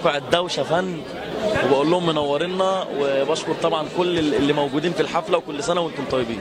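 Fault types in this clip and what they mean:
No fault types can be heard in this clip.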